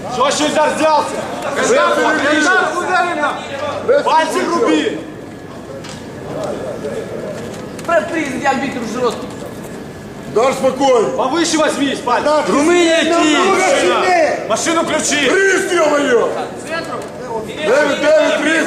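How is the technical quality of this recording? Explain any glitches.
No glitches or dropouts can be heard anywhere in the recording, so there is nothing to explain.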